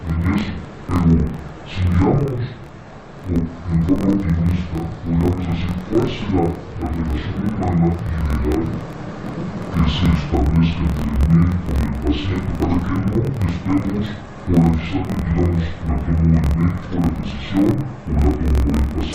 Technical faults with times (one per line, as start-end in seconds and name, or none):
0.00-19.14 interleaved audio read as planar